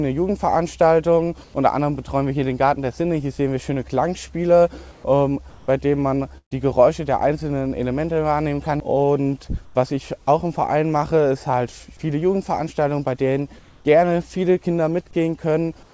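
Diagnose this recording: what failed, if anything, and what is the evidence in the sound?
Comfort noise in place of the background appears in six short pauses: 1.44–1.54 s, 4.92–5.04 s, 5.50–5.68 s, 9.65–9.75 s, 13.59–13.85 s and 15.83–15.93 s. In each, the quiet background, sitting about 24 to 31 dB below the loud passages, gives way to a steady, featureless hiss. The hiss is mostly about 1 to 4 dB quieter, and slightly louder at 13.59 s. This points to the call-processing stage, most likely discontinuous transmission: the sender stops sending during silence and the receiver fills the gap with synthetic noise.

A burst of packet loss hits at 6.38–6.53 s, a network and jitter-buffer fault. About 140 ms of audio is missing. The receiver extends the last sound for roughly 130 ms, fading it out, and about 100 ms of that ends up close to silence. The sound then resumes further along, with the lost section simply gone. 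Nothing is audible above 8 kHz, which fits a G.722 call codec on this path.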